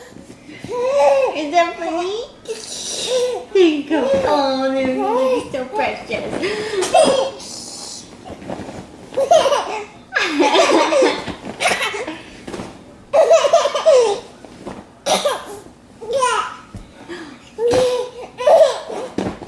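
No technical faults can be heard anywhere in the recording. Nothing interrupts or alters the sound at any point.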